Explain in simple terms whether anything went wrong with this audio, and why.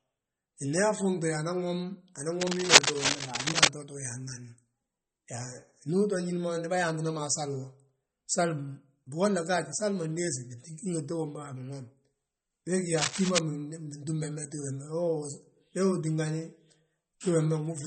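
The speech sounds watery and swirly, and the highest treble above 16 kHz is gone. That damage is clearly audible and is likely due to heavy MP3 compression.

Scratching bursts of cable scratch noise appear from 2.41 to 3.70 s, louder than the speech, and from 12.97 to 13.40 s, about as loud. A worn cable or connector being moved is the likely cause.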